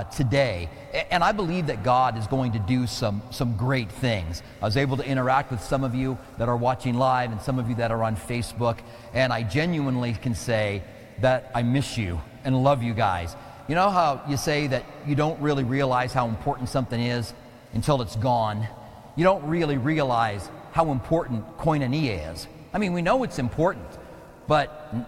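No audible faults anywhere in the clip.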